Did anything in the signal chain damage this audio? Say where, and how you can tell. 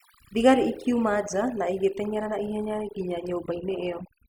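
Yes. Throughout the speech, the background drops to near silence dotted with twinkling specks. That is overdone noise removal at the processing stage: a suppressor set too hard cuts individual frequency bands near its noise estimate, taking quiet parts of the voice with them.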